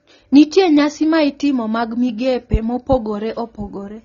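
Low-bitrate audio saved at a high bitrate, throughout the clip: the speech has nothing above 7 kHz and keeps the artefacts of a low-rate first encoding. It was likely a low-bitrate AAC file re-encoded as high-bitrate MP3, which could not restore what was lost.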